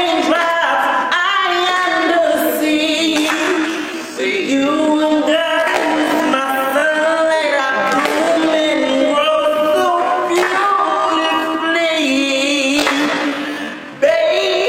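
From 2.94 s to the end, a time-stretched section abruptly slows the sound to about 0.55 times its pace. Unlike a simple slowdown, the pitch stays put, likely because software repeated short pieces to fill the length. The result drags.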